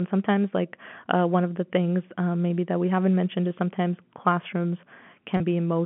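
At 5.37 s, just after "mentioned is sometimes classrooms", there is a packet loss with pitch repetition. 30 ms of audio goes missing, which points to a single lost packet. The receiver bridges the hole by repeating the last pitch period until 5.40 s. The gap is too short to fade into silence. Instead the speech briefly sounds held and slightly buzzy, then carries on. The narrow band of the G.711 telephone line stays audible throughout.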